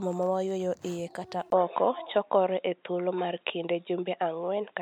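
An input switched to a poorer device at 1.50 s and stays that way to the end. After a 20 ms gap, the speech turns dull and boxy, with nothing above 3.8 kHz, the narrow band of a lesser microphone or a headset's call profile. The likely cause is the system changing its input mid-recording. The level shifts by roughly 5 dB, and a faint new background noise appears, well below the speech.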